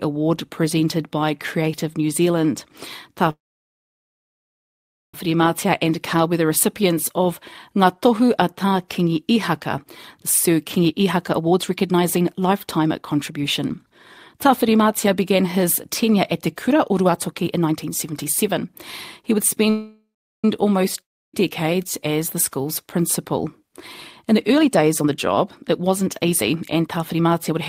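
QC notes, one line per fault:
3.30–5.15 s, call audio freeze: speech halts for 1.83 s, mostly silence after a brief fading fill. It likely comes from packets held up in transit. Speech resumes exactly where it stopped, so nothing is lost, unlike a dropout.
7.17–19.66 s, jitter buffer speed-up: speech runs at 113% speed with unchanged pitch. Tiny pitch-period slices are trimmed repeatedly, about one and a half seconds in total. It sounds hurried rather than higher.
19.70–20.45 s, call audio freeze: a 0.74 s pause, about 0.38 s of it silent, with a short decaying fill first. It likely comes from delayed packets. The speech continues intact afterward with no words skipped.
21.01–21.34 s, long network dropout: about 0.33 s of audio never arrives, and 0.31 s of it is heard as silence. It likely comes from lost packets. Speech returns further on with that portion missing, unlike a freeze.
23.58–27.60 s, jitter buffer speed-up: speech is compressed to 118% speed at the same pitch, with roughly 0.7 s removed. 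The rush comes from pitch-period cuts, not resampling, which is why the voice does not rise.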